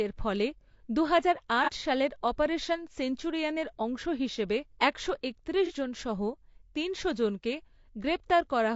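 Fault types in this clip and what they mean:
Low-delay AAC compression: speech sounds rough and grainy throughout, with noise between harmonics and a synthetic upper band, likely from AAC-ELD at a low bitrate near 32 kbps.
AAC frame loss with concealment: brief smeared, noisy patches at 1.64 s and 5.66 s, where a missing 30 ms frame was rebuilt from the preceding spectrum.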